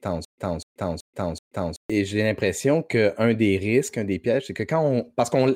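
From the very start until about 1.90 s, the playback likely stalled and retried, and each retry replayed the last fragment before running dry: a stutter with silent gaps. The same 0.25 s slice of speech repeats four times at an even 379 ms pace, each burst followed by about 132 ms of dead digital silence. The speech that should have filled that stretch never plays, so the opening is lost to the loop.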